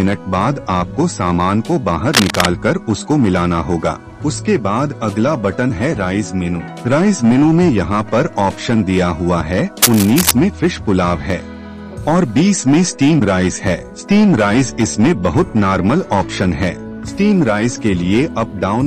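Cable scratch noise appears from 2.13 to 2.47 s and from 9.82 to 10.31 s. Harsh rustling bursts sit about level with the sound. A worn connector being moved is the likely cause.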